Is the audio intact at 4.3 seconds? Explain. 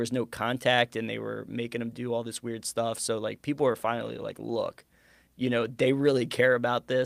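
No, 4.3 s sits inside a call bitrate drop that starts at 3.57 s and runs to the end. The encoder gets squeezed from 64 to 24 kbps, bottoming out for about 2.6 s, so the speech codes coarsely, loses its top end, and sounds muffled and watery.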